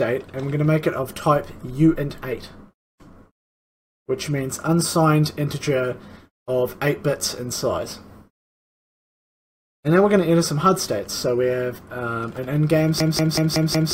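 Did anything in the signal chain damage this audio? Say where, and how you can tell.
Yes. At the driver or buffer stage, the system hung from 13.00 s to 13.93 s while the sound hardware kept replaying its ring buffer, a system hang loop. One 185.76 ms slice of audio repeats exactly five times, giving a machine-gun stutter at about 5.38 Hz rather than a buzz. A loop that long fits an 8192-sample buffer. Little or no audio appears to be lost around the repeats.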